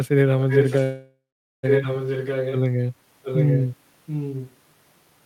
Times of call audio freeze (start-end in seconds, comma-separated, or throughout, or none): 0.83-1.65